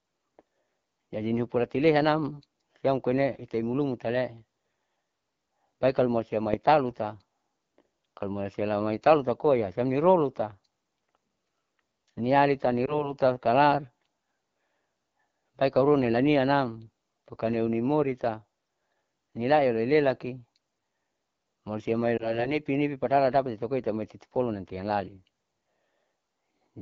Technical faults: AMR wideband (HD Voice) codec; lost AMR speech frames

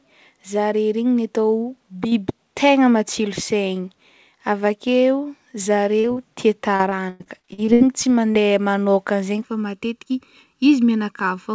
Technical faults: short concealed packet loss; repeated packet loss (robotic sound); channel delay (comb filtering)

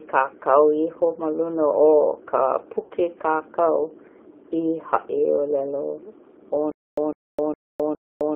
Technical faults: G.729 codec; VoIP packet loss concealed by the speech codec; stutter with silent gaps

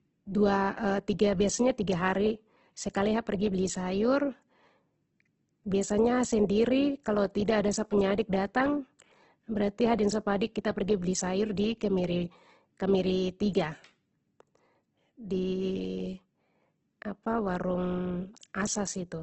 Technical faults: Opus compression

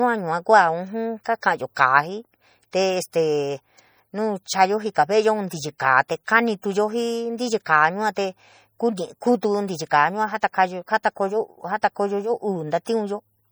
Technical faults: MP3 compression

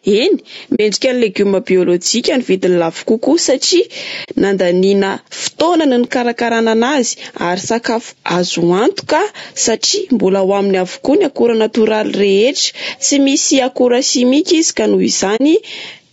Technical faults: gain pumping; low-delay AAC compression; AAC frame loss with muting; overlapping chunks

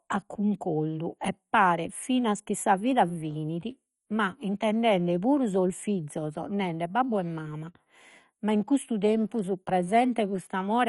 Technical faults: MP2 compression

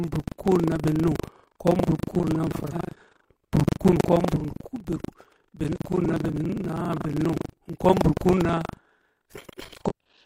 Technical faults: buffer tearing; damaged data in a compressed stream

